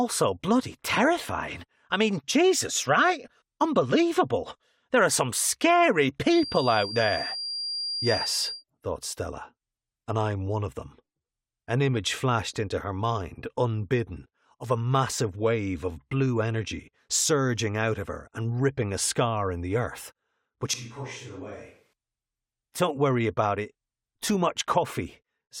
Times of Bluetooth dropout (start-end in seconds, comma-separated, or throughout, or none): none